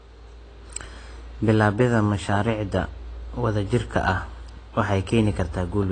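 AAC compression runs throughout this speech clip: nothing is present above 9.3 kHz, and the sound is dull and smeared, likely from coarse AAC-LC quantisation at a low bitrate near 24 kbps.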